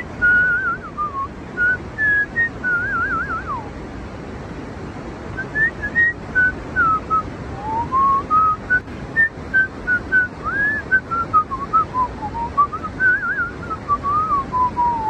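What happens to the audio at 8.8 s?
One stereo channel likely drops out briefly from 8.81 to 8.87 s, a gap of about 60 ms. Once the two channels are summed to mono, sound common to both falls abruptly by about 6 dB, and anything carried only by the missing channel vanishes until it returns.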